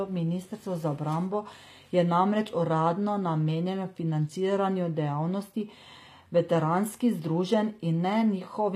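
Speech throughout shows plainly audible HE-AAC compression damage, likely from a low bitrate around 24 kbps: sibilants sound gritty and metallic, and a spectrogram shows copied, blocky treble bands over the lower spectrum with nothing above 15.5 kHz.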